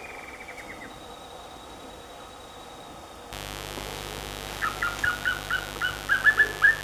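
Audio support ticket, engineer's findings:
Mains buzz from 3.32 s to the end. Steady raspy buzz sitting not far under the signal. 50 Hz mains, spiky harmonics climbing into the kHz range. Suspect a dimmer, rectifier or broken shield letting switching spikes in twice a cycle.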